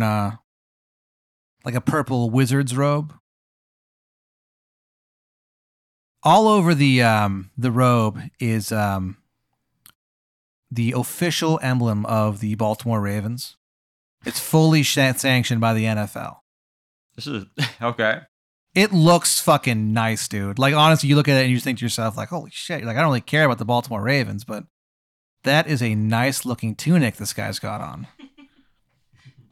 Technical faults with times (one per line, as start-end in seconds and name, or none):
none